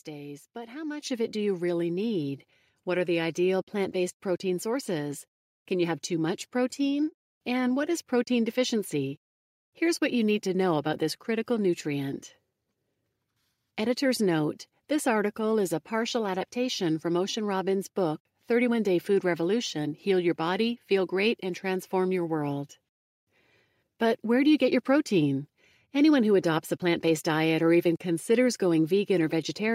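Microphone volume stepped up at 1.02 s, between "days but how" and "of it do you": input gain rose about 8 dB in one step, lifting voice and background together.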